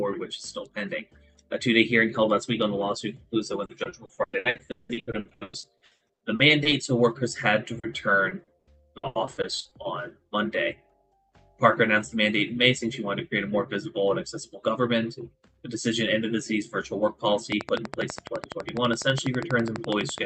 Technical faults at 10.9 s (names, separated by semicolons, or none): none